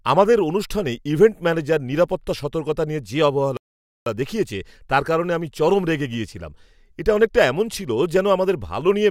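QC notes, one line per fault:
3.57–4.06 s, playback stall: the speech halts mid-flow into 0.49 s of silence, then resumes, likely because the player ran out of data or its thread was blocked. The waveform drops to a flat line, and the spectrogram shows a blank, hard-edged vertical band.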